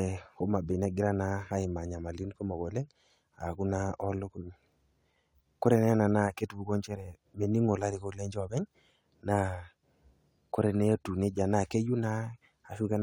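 Speech recording; no technical faults can be heard.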